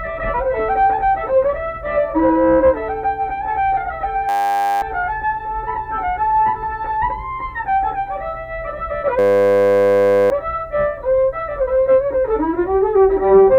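At 4.29–4.82 s and 9.19–10.3 s, a system hang loop repeats one 10 ms buffer, giving a steady 100 Hz buzz. This shows as evenly spaced harmonic lines and identical waveform cycles, replacing roughly half a second, then a second, of audio.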